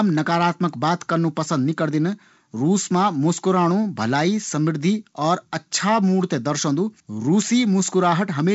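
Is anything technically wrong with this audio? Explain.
No, nothing is technically wrong: the speech has passed through G.722 wideband telephone coding at 56 kbit/s, which leaves nothing above about 7.7 kHz and adds only the light coding texture that this path normally produces at that rate.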